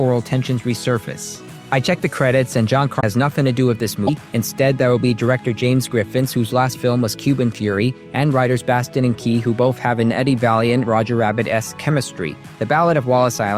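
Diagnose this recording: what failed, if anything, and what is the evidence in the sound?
Codec stage. Brief skips at 2.99–3.03 s and 4.06–4.10 s. Likely a broken MP3 bit reservoir: frames after a cut read stray bytes.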